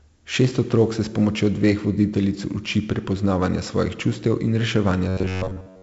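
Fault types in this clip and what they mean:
4-bit ADPCM compression: A gritty, heavy hiss rides on the speech throughout, rising and falling with its loudness, with roughness on sharp onsets, and nothing is heard above 7.7 kHz, giving a dull top end. Each sample is stored as a coarse 4-bit step from a predicted value, with an adapting step size that can't track fast changes. The damage level fits a 64 kbps stream at a low sample rate.
robotic sound from repeated short buffers: From 5.09 s to 5.82 s, just after "prepoznavanja svojih čustev in", the speech turns into a rigid, metallic buzz fixed at 93.8 Hz, and most of that stretch is made of repeats. The likely cause is audio arriving too slowly, with the player filling gaps by replaying one fragment of about 10.7 ms over and over. That repetition imposes the buzz pitch while the real audio is skipped.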